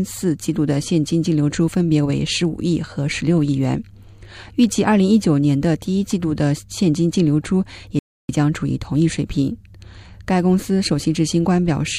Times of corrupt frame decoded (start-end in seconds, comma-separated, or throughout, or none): none